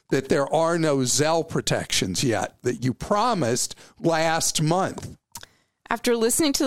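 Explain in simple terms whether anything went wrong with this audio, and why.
Nothing went wrong here; the speech comes through intact.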